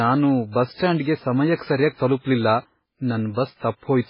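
From start to end the speech carries heavy codec damage, likely from MP3 compression at a very low bitrate, around 16 kbps. Nothing is heard above 5.3 kHz. Weak frequency lines drop in and out between frames. The sound turns watery and swirly, with smeared attacks.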